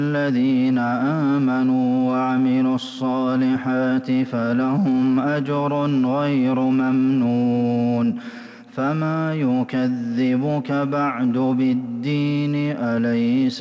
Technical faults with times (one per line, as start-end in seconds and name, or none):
none